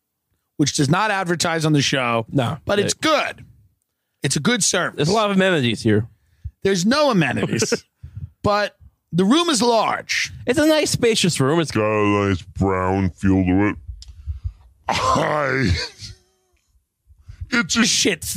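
A section at the wrong speed runs from 11.75 to 17.83 s, where the audio plays at about three quarters of its proper rate, 0.757 times normal. Because speed and pitch are tied together, everything in that stretch drops by roughly five semitones and drags. The sound turns deep and sluggish, then snaps back to normal tempo and pitch at the end. The likely cause is the section being replayed or resampled against a mismatched clock.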